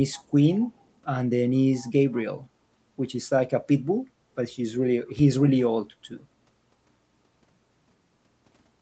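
Speech recorded through a call's microphone processing carries two kinds of fault. An echo canceller on a loudspeaker end most likely let part of its microphone pickup return, so a faint echo leak, a copy delayed by 167 ms and well below the speech, surfaces at 0.12 to 0.24 s and again at 1.72 to 1.92 s. At 5.19 to 5.25 s, a supply switching on or off on the live input sends a step through the coupling capacitors, heard as a phantom power thump, a deep knock decaying over about 13 ms.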